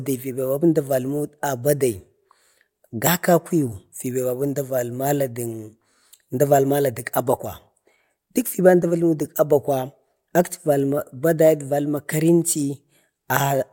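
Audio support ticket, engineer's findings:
No faults found in this speech recording; nothing to attribute to any component.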